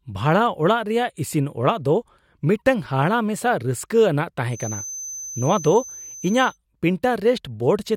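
From 4.48 to 6.59 s a feedback whistle sits behind the speech: a thin, steady 6.2 kHz tone about 15 dB below the voice, swelling and fading slowly in level. Likely cause is a loudspeaker-to-microphone loop held just at the edge of feedback.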